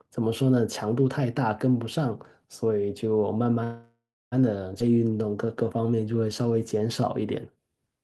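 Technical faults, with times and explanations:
3.63–4.34 s call audio freeze: the sound stalls into a fading buzz, then about 280 ms of silence, likely from late packets. The spectrogram shows smeared bands, then a blank gap.
4.80–4.82 s skip ahead: roughly a third of a second of audio is gone and playback jumps straight on, leaving an abrupt splice in the waveform and a hard vertical seam on the spectrogram.
4.85–7.02 s jitter buffer slow-down: repeated pitch periods stretch the sound to 89% speed, adding 249 ms at unchanged pitch. Harmonics look elongated, with repeated identical cycles in the waveform.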